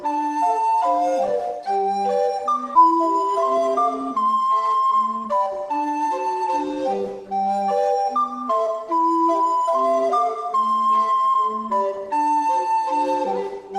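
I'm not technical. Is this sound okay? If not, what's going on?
No. There is a skip ahead at 2.75 s. A chunk of sound, roughly three-quarters of a second of it, never plays, and playback jumps straight from before the gap to after it with no pause. This happens when audio travelling over a network gets held up and then arrives in a rush. The receiving side runs out of room to store it all, so it throws away the older part and carries on from newer audio that was already waiting.

Right after that, from 2.85 s to 4.56 s, comes a jitter buffer speed-up. The receiver was still holding more audio than it wanted, which meant extra delay. To catch up, it kept snipping out tiny slivers of sound, each far too short to notice alone, and removed around a seventh of a second in total. The result plays about 7% faster for those moments, at the same pitch, so it can sound slightly rushed.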